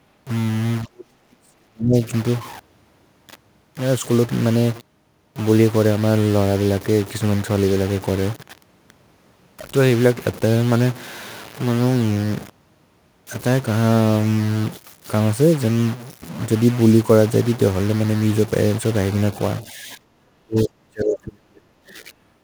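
A speech recording carries distortion from start to finish, and even the pauses are filled with noise. That points to a stuck bit, likely a bit line held at 0 or 1. Clipping differs because it roughens only the loud peaks and leaves the gaps quiet. There is also speech suppressed in double talk from 0.84 to 1.96 s and again from 19.64 to 22.1 s. The voice drops by as much as about 40 dB, likely because an echo canceller was turning down both sides at once. Unlike packet-loss dropouts, these come from the canceller turning the voice down rather than from lost data.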